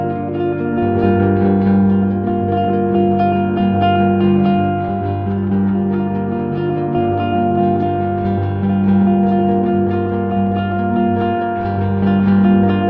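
No technical faults can be heard anywhere in this recording of sounds. There is nothing to place on a timeline and nothing that calls for an explanation.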